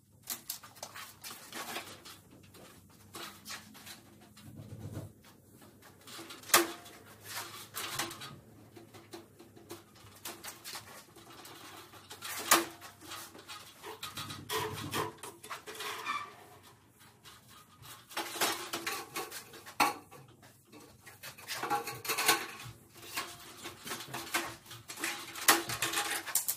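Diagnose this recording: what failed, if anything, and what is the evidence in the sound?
The failure is at the codec stage: damaged data in a compressed stream. Brief blips at 6.39–6.41 s and 18.14 s show as thin broadband vertical streaks on a spectrogram and abrupt spiky glitches in the waveform, where corrupted bytes made the decoder misread frames and resynchronise.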